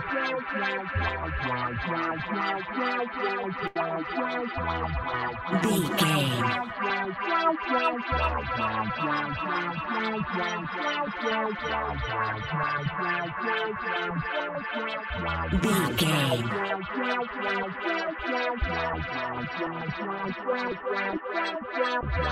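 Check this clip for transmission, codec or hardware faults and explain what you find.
One transmission fault is present. Short stall from a late packet, 3.67 to 3.76 s: the jitter buffer ran dry, so the last sound was stretched for about 81 ms, heard as a brief held buzz before continuing, with nothing lost.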